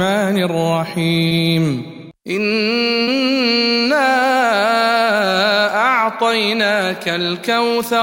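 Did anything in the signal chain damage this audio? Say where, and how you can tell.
Yes, there's short concealed packet loss on the network leg, at 1.27 to 1.34 s and again at 3.03 to 3.10 s. Each time about 40 ms of audio never arrived, and the receiver covered the gap by extending what it last had, then crossfading back into the real signal. You hear it as a brief smeared, wobbly patch, and whatever was in those gaps is simply gone.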